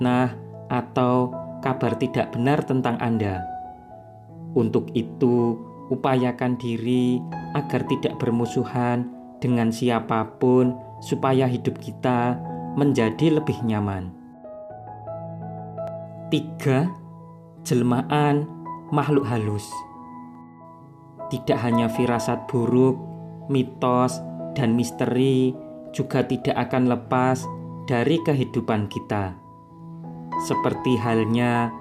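Four brief clicks occur at 15.88, 19.04, 20.35 and 25.04 s, each a single sharp tick with nothing audibly missing around it. Dropped samples are the likely cause: a fraction of a millisecond of the stream vanishes, so the waveform jumps abruptly from one value to a later one instead of moving smoothly. On a waveform each shows as a tiny step discontinuity, and on a spectrogram as a thin vertical line spanning the frequency range.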